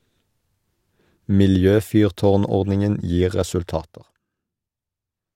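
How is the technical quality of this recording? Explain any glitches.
One glitch stands out in this speech recording. From 3.68 to 4.26 s, zipper noise appears. The level drops about 15 dB in unsmoothed 2 dB steps, roughly fifteen per second, each making a small click heard as ticking.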